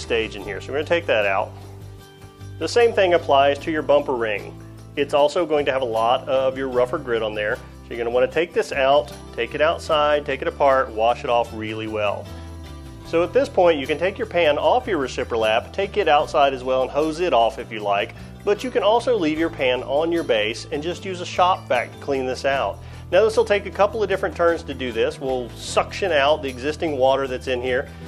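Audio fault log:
No audible faults detected.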